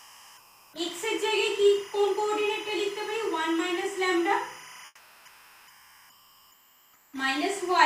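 From the first moment to the end, linear timecode bleeds in from a neighbouring track or cable. This timecode bleed is a square wave flipping between roughly 1 kHz and 2 kHz and clocking at 25 frames per second, mixed about 20 dB under the main sound. It produces a steady, chirping warble that rides behind everything, unchanged in level or rhythm whatever the foreground is doing.

Two stretches show comfort noise in place of the background, from 0.00 to 0.73 s and again from 4.85 to 7.13 s. The likely cause is discontinuous transmission in an Opus-style sender, which stops sending real audio during quiet passages. The receiver fills the gap with generated noise shaped like the background. The ambience there becomes flat and textureless, about 7 dB quieter in the first stretch and about 9 dB quieter in the second. The real background returns when the sound picks up again.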